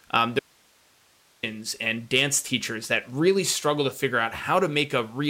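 At 0.39 s the speech cuts off abruptly, and until 1.43 s, just before "and dance teachers that", the gap holds only hiss, roughly 35 dB below the normal signal level. This is an audio dropout to a faint residue, lasting about 1.04 s. The likely cause is a brief loss of the wanted signal while the downstream path stayed live, so its own noise floor carried through. The hard edges on both sides rule out a natural pause or fade.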